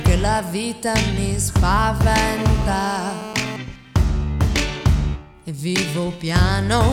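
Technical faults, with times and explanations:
2.38–3.57 s: GSM phone buzz. A steady, raspy buzz at 217 Hz with dense harmonics, unrelated to the audio, sits about 13 dB below the signal. A nearby 2G phone on a call transmits in 217 Hz bursts that the audio circuitry rectifies into sound.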